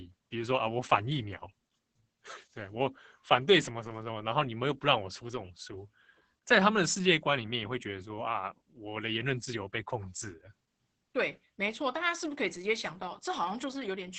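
From start to finish the speech carries Opus voice compression damage. Nothing is present above about 8.6 kHz, the ceiling of the coder's wideband SILK mode, so sibilants and breath lose their top end and the voice sounds muffled. The linear-prediction coder is working with very few bits, which fits a bitrate near 10 kbps. The coarsely coded excitation makes the voice hoarse and slightly robotic, with heavy artefacts throughout.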